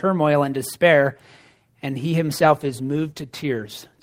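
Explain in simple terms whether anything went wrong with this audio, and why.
From 2.26 s, just after "and he", the speech turns rough and muffled to the end. This is a call bitrate drop: the connection forced much coarser encoding.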